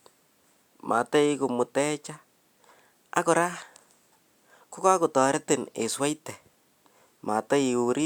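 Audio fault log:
7.66 s, bit error spike: a single sample jumps to about -29 dBFS and immediately returns, as one flipped bit in storage or on a digital link would cause, producing one sharp, broadband tick that bears no relation to the surrounding speech.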